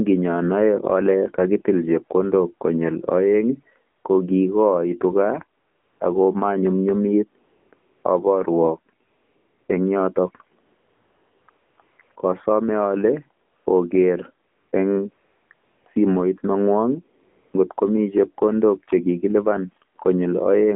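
From the start, the whole speech clip has been through the AMR narrowband mobile codec. The band runs only from about 200 Hz to 3.5 kHz, so there's no air or sibilant sparkle up top. The voice is rebuilt from a vocal-tract model fed with a few pulses per subframe, and at this rate the buzzy, synthetic edge is plainly audible. That fits one of the lower AMR-NB modes, around 7.4 kbps.

On top of that, AMR comfort noise kicks in sixteen times between about 3.98 s and 17.54 s. Each time, the phone decided nobody was talking and stopped sending speech frames, and the receiver filled the gap with smooth synthetic noise built from a rough level-and-spectrum sketch. The gaps run from 40 ms to 820 ms, and the longest is around 10.66 to 11.48 s. They cluster between 11.5 and 12.2 s and again around 15.1 to 15.9 s. You hear a flat, steady hiss switching in and out in place of the real background.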